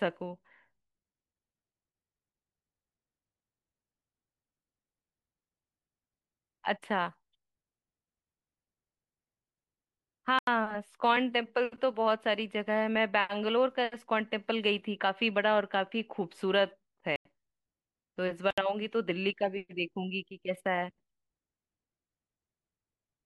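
At 10.39, 17.16 and 18.51 s the speech drops into blocks of digital silence (about 85, 93 and 70 ms), cutting out and back with no fade. The output buffer likely wasn't filled in time; the 93 ms gap fits a 4096-sample buffer.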